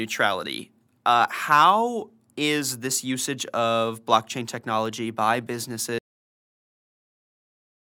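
At 5.98 s the speech stops mid-sound in a cut-off end: the final buffers never played, so the waveform drops straight to flat digital silence with no decay tail.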